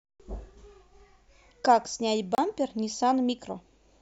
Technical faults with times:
2.35-2.38 block of digital silence

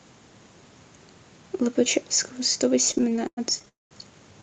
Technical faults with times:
2.89-3.68 repeated stalls (stutter)
3.68-3.93 call audio freeze

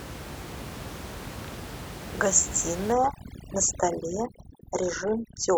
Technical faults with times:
2.92-5.57 overdone noise removal

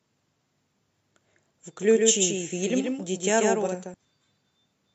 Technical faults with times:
1.79-3.94 doubled audio track
3.63-3.69 compressed frames skipped

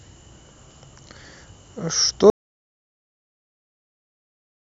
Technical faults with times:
2.30-4.73 audio dropout to silence

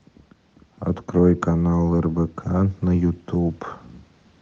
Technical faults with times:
0.64-3.63 automatic gain rising

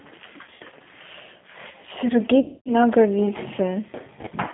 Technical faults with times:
0.00-4.54 G.729 codec
0.44-0.73 VoIP packet loss concealed by the speech codec
2.40-2.73 VoIP packet loss concealed by the speech codec
4.21-4.35 VoIP packet loss concealed by the speech codec

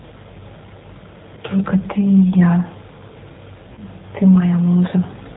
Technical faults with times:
0.00-5.36 G.729 codec
1.35-1.39 VoIP packet loss concealed by the speech codec
3.73-3.81 VoIP packet loss concealed by the speech codec

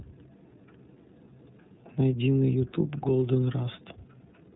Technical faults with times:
0.00-4.56 iLBC codec

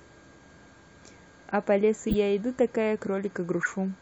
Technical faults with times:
2.09-2.14 corrupt frame decoded
3.63-3.68 corrupt frame decoded

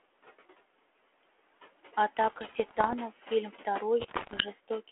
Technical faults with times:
0.00-4.91 noise suppressor artifacts
2.16-2.94 bit errors on an ADPCM link
4.00-4.43 bit errors on an ADPCM link

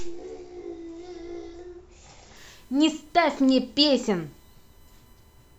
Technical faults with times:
2.37-5.58 USB whine

